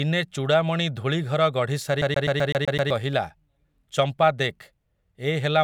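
A CD stuck on one turn runs from 2.02 to 2.91 s. A scratch on the disc throws the laser back to the same point on each rotation, so one fragment of about 127 ms of the speech is replayed seven times in a row, each jump marked by a brief mute. The result is a rapid, perfectly regular stutter that freezes the talker mid-sound before playback releases and moves on.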